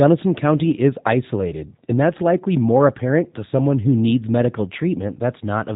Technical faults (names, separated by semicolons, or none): G.729 codec